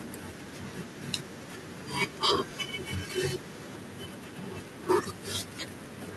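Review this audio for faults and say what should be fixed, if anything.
No faults; nothing to fix.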